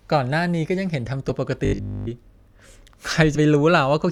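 At 1.29 s the audio jumps ahead by about two 20 ms frames, roughly 40 ms of material lost. This is compressed frames skipped: the decoder never plays those frames.

From 1.65 to 2.09 s the speech becomes a rigid metallic buzz pitched at 50 Hz that loosely tracks the words. This is robotic sound from repeated short buffers, likely caused by a 20 ms chunk looping while nearly all fresh audio is skipped.

At 3.35 s a second compressed-frames-skipped jump drops about three frames, roughly 70 ms.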